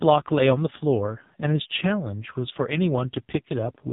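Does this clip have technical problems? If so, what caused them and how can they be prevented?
Yes. The speech runs through an AMR narrowband mobile codec for the whole clip. Nothing above about 3.8 kHz survives, so the sound is dull and boxy. The codec rebuilds speech from a vocal tract model fed by a few pulses per short subframe. Here the damage is heavy. The speech sounds buzzy and synthetic, which fits one of the lowest AMR-NB modes, near 5.15 kbps. To prevent it, record or transmit over a wideband path at a higher bitrate.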